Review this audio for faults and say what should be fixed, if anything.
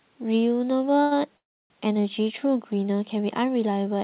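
At 1.02 to 1.13 s there is a short stall from a late packet. The sound at that point is held for about 90 ms with a faint buzzy smear before the speech resumes exactly where it left off, so nothing is lost. A packet arrived after its playout time, the jitter buffer ran dry, and the receiver extended the last sound until the packet arrived, adding about 90 ms of delay. Deeper or adaptive jitter buffering on the receiving end would absorb this arrival lateness.

From 1.37 to 1.72 s there is a call audio freeze. A brief buzzy continuation of the last sound decays into roughly 290 ms of silence, and the speech then picks up again from the same point. In total about 330 ms is inserted and nothing is missing. The likely cause is packets held up in transit that emptied the jitter buffer, so the receiver concealed the gap and then went silent until delivery resumed. Nothing is audible above 4 kHz, which fits a G.711 narrowband call path. 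Fixing the network path's congestion or queuing, or prioritising the audio traffic with QoS, would prevent these long delivery stalls.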